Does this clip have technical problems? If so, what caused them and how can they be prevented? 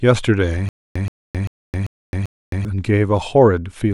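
Yes. Stutter with silent gaps from 0.69 to 2.65 s: a 126 ms fragment repeats five times, every 392 ms, separated by 266 ms of digital silence, likely from a stalled stream replaying its last buffer. Larger buffering and a steadier network connection would prevent it.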